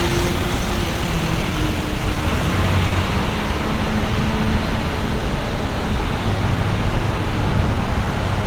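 Clock drift between sender and receiver runs through the whole clip. The sender's clock is about 3 percent slow against the receiver's, so the jitter buffer keeps draining and the receiver must keep filling in material to stay in step. The result is small, uneven timing hiccups throughout.

From 0.09 to 2.22 s, repeated timing corrections hold playback at 96 percent speed. The receiver keeps stretching short pieces, adding roughly a tenth of a second in total. Each insertion is slight, heard mainly as a faintly dragging, unsteady tempo rather than distinct glitches.

At 2.88 to 2.95 s, a short stall from a late packet occurs. The jitter buffer ran empty and the receiver held the last sound for 40 ms until data arrived, adding 40 ms of delay with nothing lost. It sounds like a brief freeze, a sound held slightly too long with a slight buzz or dip.

From 4.01 to 8.43 s, the repeated timing corrections resume at 96 percent speed, this time adding roughly 150 ms. 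The stretches all lengthen the audio in the same direction at irregular spacing, giving a mildly lurching, slowed feel over the clip's second half.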